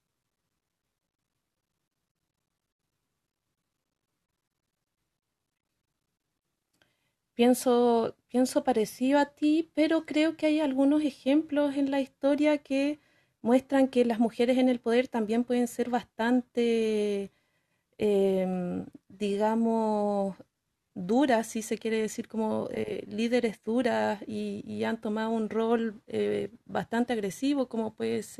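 No technical faults can be heard anywhere in the recording.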